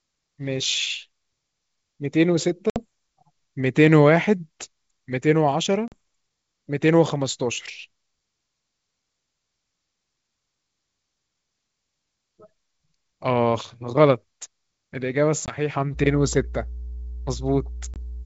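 At 2.70 to 2.80 s there is packet loss on an ADPCM call. About 60 ms of audio drops out, roughly three packets' worth. The gap is replaced by silence with hard edges. The decoder's predictor and step size then no longer match the sender's. So the speech comes back slightly distorted, and settles within tens of milliseconds. The same happens at 5.88 to 5.94 s, with a 40 ms hole.

A third loss falls at 15.46 to 15.54 s. It is shorter, about 20 ms, a single packet. Then, from 15.92 s to the end, mains hum appears. It is a steady 60 Hz tone with some low harmonics, fed in from the power line through a ground loop or a nearby transformer. It is loud, only about 10 dB below the speech. The wideband G.722 coding stays clear above it. A last 20 ms loss cuts in at 17.94 to 17.97 s, under the hum.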